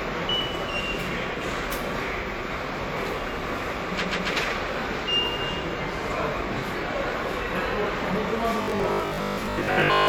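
Repeated frames appear from 4.00 to 4.28 s. A short stretch of about 139 ms, which fits a run of three compressed frames, was played back twice more after its first pass, so the same slice of sound loops in a quick stutter, and the clip runs about 0.28 s longer than it should.

From 8.62 s to the end at 10.08 s, the sound turns into robotic sound from repeated short buffers: a stiff, metallic buzz fixed at 50 Hz, still tracking the broad shape of the original. That pitch matches a 20 ms block repeated over and over, and most of the audio in this stretch seems to have been skipped, likely because new audio arrived too slowly and the playback filled the gaps by looping the last buffer.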